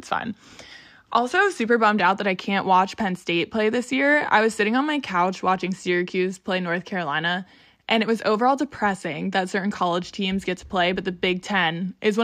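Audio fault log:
No faults heard anywhere in the speech.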